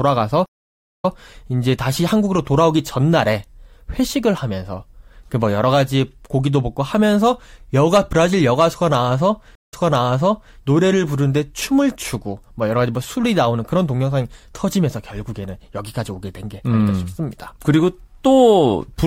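At 0.46 s the speech drops out for 526 ms, then picks up again at 1.12 s. This is a stream reconnect. The connection broke, the player reconnected, and a fresh decoder started mid-stream. Playback resumes 131 ms earlier than where it stopped, so a short stretch repeats. A second reconnect runs from 9.55 to 10.56 s. Here the gap is only 144 ms, but the audio jumps back 862 ms, repeating almost a second of speech.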